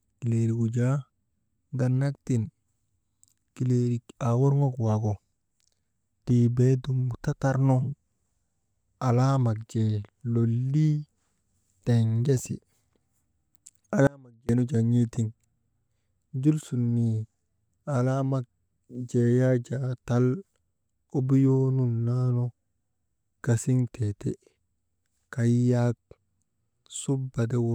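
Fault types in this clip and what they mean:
Audio dropout to a faint residue: the speech cuts out abruptly for about 0.42 s at 14.07 s, leaving only a faint trace roughly 30 dB down, likely a brief signal-path interruption.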